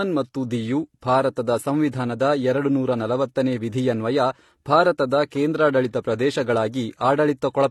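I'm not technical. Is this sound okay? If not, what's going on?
No. Transcoding between lossy codecs affects the speech from start to finish. The sound was most likely squeezed by one compression method and then squeezed again by a different one. Each pass throws away detail and adds its own smearing and swishy roughness, so the second pass ends up working on the first one's flaws. Both kinds of damage are heard together, and nothing remains above about 19.9 kHz.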